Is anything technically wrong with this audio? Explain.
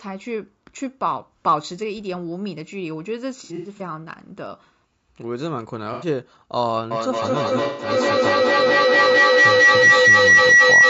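Yes, there are three kinds of fault in this speech clip.

Throughout, the speech sounds rough and grainy, with noise filling the gaps between pitch harmonics and an upper band that sounds dulled or synthetic. This is likely low-delay AAC compression (AAC-ELD): its short frames resolve harmonics poorly and spend bits inefficiently, and the plainly audible damage fits a low bitrate of around 32 kbps.

AAC frame loss with concealment occurs three times: from 3.44 to 3.82 s, from 5.93 to 6.07 s, and from 7.64 to 7.90 s. In each, the decoder lost frames and rebuilt the missing audio from the last good spectrum, so these stretches sound smeared, noisy or phasey. The first event is scattered, with about 180 ms lost across 360 ms and the longest gap around a tenth of a second. The other two lose about 90 ms and 150 ms.

A feedback howl starts at 6.91 s and continues to the end. A microphone and loudspeaker in the same room are both on the call, so each trip around the loop adds gain. 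The repeats narrow to a tone near 2 kHz that peaks about 13 dB above the speech, with repeats roughly 200 ms apart, matching the loop delay.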